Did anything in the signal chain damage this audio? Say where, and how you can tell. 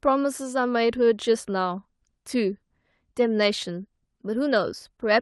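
No, nothing damaged this audio.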